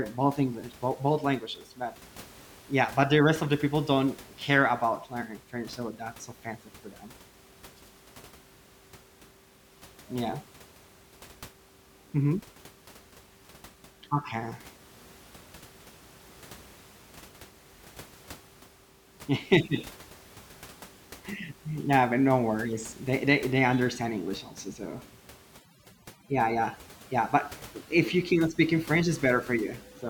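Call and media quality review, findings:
Overdone noise removal, 25.6 s to end (30.1 s). Noise suppressor set too aggressive: bands near its noise estimate gated hard, taking quiet speech components too. Room noise, about 24 dB below speech, drops and breaks up into twinkling specks.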